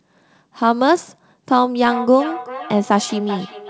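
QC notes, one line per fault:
1.87–3.69 s: feedback echo between two devices. A nearby device replays this microphone's signal, which is picked up again, so the speech recurs roughly every 0.4 s, about 12 dB down. The spectrogram shows faint, smeared syllable copies at even spacing, filling the waveform's pauses.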